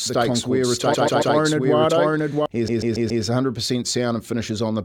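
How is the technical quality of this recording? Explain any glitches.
The recording has two clear technical faults: a doubled track early on and two stutters.

From the start to 2.46 s, a doubled audio track runs. A full-band copy trails roughly 0.7 s behind at about the same level, likely from a second, slower capture path. It has no decay or room colour, which sets it apart from a real echo, and it stops abruptly at 2.46 s.

Repeated frames cause stutters at 0.93–1.35 s and 2.67–3.23 s. A 139.3 ms block, which fits a run of several compressed frames, replays three and then four extra times. Unlike the doubled track, the repeats play one after another rather than overlapping, adding 0.42 s and 0.56 s to the running time.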